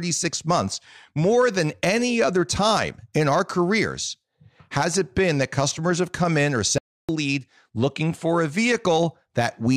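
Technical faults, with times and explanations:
6.78–7.09 s, audio dropout to silence: the speech stops abruptly and about 0.31 s of silence follows, with no room tone, before sound resumes mid-flow. That dead floor and hard edges, unlike a natural pause or gate, point to a likely lost input.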